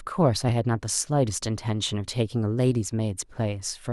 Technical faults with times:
none

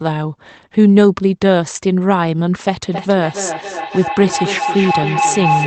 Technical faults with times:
2.92-5.67 feedback howl

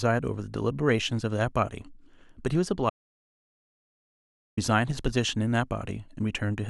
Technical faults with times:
2.90-4.57 audio dropout to silence

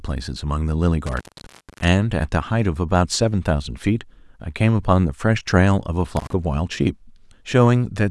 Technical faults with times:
1.06-1.88 intermittent contact
6.17-6.33 intermittent contact

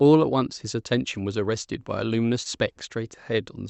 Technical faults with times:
2.43-2.47 short concealed packet loss

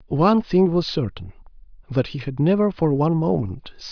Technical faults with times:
none

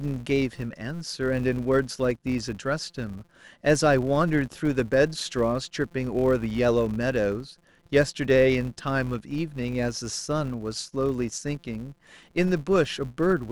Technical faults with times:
0.00-13.52 filter restarted on every block

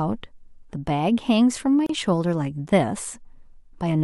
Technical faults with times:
1.86-1.89 gap at a join of encoded pieces

